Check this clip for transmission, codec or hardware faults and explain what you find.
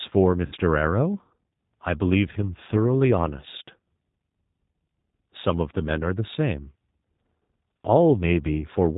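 Two faults are present: G.729 coding across the whole clip and one concealed packet-loss gap near the start.

G.729 codec, throughout: the speech was squeezed into an 8 kbit/s G.729A stream, which models the signal as a vocal tract filter driven by a pitch predictor and a handful of pulses per short frame, and discards everything above 4 kHz. The damage is plainly audible: the voice sounds band-limited and dull, with a rough, slightly synthetic grain to it.

VoIP packet loss concealed by the speech codec, from 0.46 to 0.55 s: about 60 ms of the stream never arrived, which fits three 20 ms packets. The decoder filled the hole by extrapolating from its last pitch and filter settings while turning the gain down frame by frame. The speech smears into a buzzy tone or coloured noise that fades, and because each frame depends on the previous one, the voice stays weak or distorted for tens of milliseconds or more after the packets resume.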